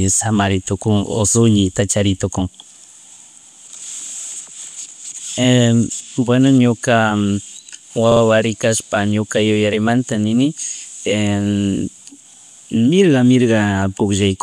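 It's a speech clip with one glitch: a burst of repeated frames between about 8.11 and 8.21 s, right before "kashpa ñuka yuyarimanta nini". A 48 ms chunk of compressed audio got written or sent more than once, so the decoder plays that same slice two extra times. You hear it as a quick stutter, and the clip ends up about 96 ms longer than it should be, which points to a duplicated pair of frames in the stream.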